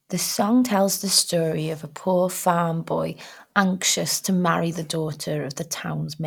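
Nothing in the speech recording points to a technical fault, and the signal stays intact and continuous throughout.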